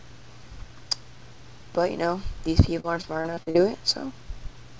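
Audio carried over a G.722 call path with nothing above 8 kHz has repeated packet loss from 2.80 to 3.56 s. Short gaps, the longest 41 ms, are patched by extending prior sound, leaving choppy, robotic audio.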